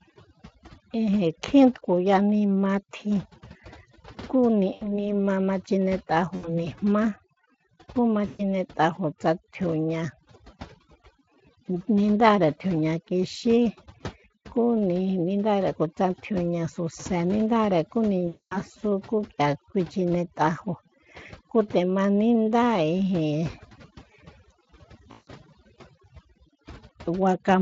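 A speech recording with overdone noise removal throughout: the noise reducer cuts individual frequency bands whenever they sit near its noise estimate, so the background drops and breaks up into twinkling specks. Unlike codec hoarseness, these artefacts follow the noise floor and pauses. At 4.73–4.94 s, 6.35–6.67 s, 8.27–8.41 s (after "kú ma"), 18.27–18.61 s (after "tjiuña suse nindáre kú") and 25.11–25.29 s there is VoIP packet loss concealed by the speech codec. Rather than a clean silent gap, the decoder stretches the last sound into a fading buzzy or coloured tone, and the voice stays weak for a moment after the packets return. The gaps span about 80 ms, 80 ms, 120 ms, 240 ms and 160 ms, which fits runs of 20 ms frames. The underlying Speex coding adds only slight roughness.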